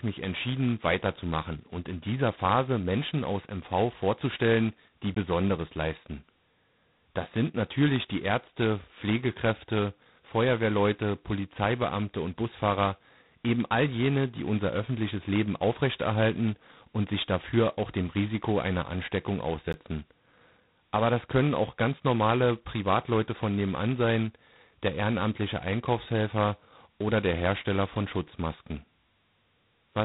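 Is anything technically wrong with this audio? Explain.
Yes. Two faults are present.

Throughout the clip the speech carries heavy G.726 ADPCM damage. Each sample is coded as a few bits of difference from an adaptive prediction, and the coarseness here fits the 16 kbit/s mode, where every sample gets only two bits. The result is a harsh, rasping hiss that rises and falls with the speech level. A spectrogram would show a hard ceiling at about 3.9 kHz and a grainy noise floor that thickens under loud syllables.

Two blocks of digital silence interrupt the audio, one at 5.15 s lasting about 18 ms and one at 19.73 s lasting about 15 ms. In each, a run of samples was replaced by zeros, which fits an output buffer that was not filled in time. The signal drops to silence and returns with no fade, so each is heard as a short tick or hole. On a waveform each appears as a flat line with abrupt edges, and on a spectrogram as a blank vertical stripe.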